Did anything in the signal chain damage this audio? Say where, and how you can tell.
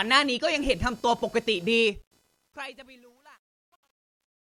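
Yes. Computer activity noise enters in the analogue wiring, through a shared ground. A buzzing pulse at around 500 Hz, roughly 35 dB below the speech, runs through the whole clip and tracks the machine's load rather than the speech. Processor, graphics or mouse current is modulating the audio ground reference.

Truncation distortion on a fade comes from the sample-format conversion or gain stage applying the fade-out that starts around 1.77 s. From 1.77 s the decaying speech turns gritty, and it is worst from 2.53 s to 4.42 s. The stepped texture points to roughly 11-bit resolution without dither, so low levels collapse into square steps.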